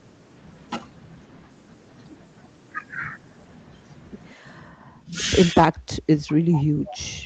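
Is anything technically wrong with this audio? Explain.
Yes. From 4.72 to 5.14 s and from 5.53 s to the end, the speech dips by up to about 10 dB, then about 25 dB. This is likely speech suppressed in double talk, where the echo canceller ducks the near talker while the far side speaks.

At 6.31–6.35 s, 6.52–6.63 s and 6.87–6.91 s, faint delayed scraps appear about 20–25 dB below the speech. They arrive 200 ms late. This is likely echo leak, where loudspeaker sound gets past the canceller.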